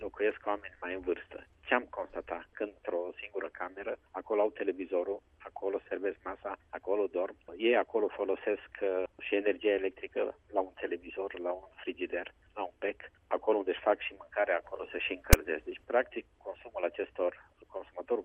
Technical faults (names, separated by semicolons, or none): file tags played as audio